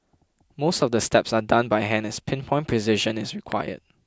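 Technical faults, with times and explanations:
3.52 s, loud pop. A single sharp pop lands on top of the speech, roughly 10 dB louder than it. The speech carries on underneath. This is likely a sudden voltage step, from a plug, switch, static discharge or driver glitch, added to the signal.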